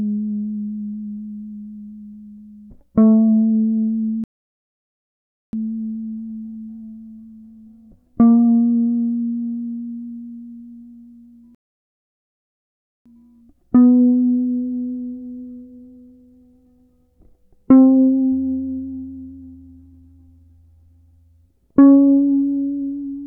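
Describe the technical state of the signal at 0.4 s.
At 0.4 s the music plays through intact, with no dropout, click, distortion or other fault audible at that point.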